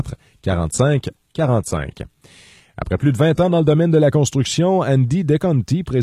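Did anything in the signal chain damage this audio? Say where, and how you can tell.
Yes, at the network and codec stage: an adaptive stream starting at a low bitrate. From 0 to 4.0 s the speech has thin, synthetic-sounding treble and stronger codec artefacts, which fits a roughly 20 kbit/s HE-AAC rendition. Then it jumps cleanly, without a gap, to a fuller rendition reaching about 14.9 kHz.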